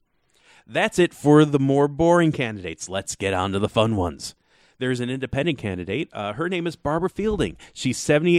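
No technical faults can be heard anywhere in the speech recording. There is no moment to point to, so no times or values apply.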